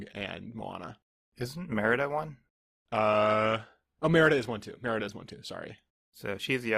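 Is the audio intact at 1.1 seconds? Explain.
No. At 1.1 seconds the speech is still inside the opening low-bitrate stretch of an adaptive stream, which runs from 0.0 to about 5.32 s. The player began on a cheap rendition to start quickly, then switched up once it had gauged the connection. Until that switch the treble is missing or synthetic and codec artefacts are prominent, which fits Opus at around 24 kbit/s. At 5.32 s quality jumps abruptly, with no gap, consistent with a step to about 64 kbit/s.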